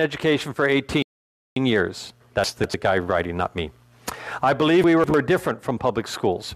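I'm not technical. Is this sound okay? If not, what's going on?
No, it isn't quite right. There are three separate problems.

The first is hard clipping, and it runs through the whole clip. The sound is slightly too loud for the system carrying it. So the tops of the loudest moments get sliced off flat. Only a tiny share of the sound goes over, and only just. You may hear a faint crackle or roughness on the loudest peaks.

The second is a rebuffering stall, from 1.02 to 1.56 seconds. The player ran out of audio it had already downloaded. It went silent for about half a second while it waited for more. Then it picked up exactly where it stopped. Nothing is missing. The clip just pauses and runs a little longer.

The third is chunks out of order. It happens twice, from 2.44 to 2.74 seconds and from 4.84 to 5.14 seconds. The sound is carried in small pieces, each a tenth of a second long. Each time, one piece turned up two pieces late and played after the ones meant to follow it. 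All the sound is still there, but in the wrong order. Each spot sounds like a brief jumbled stutter.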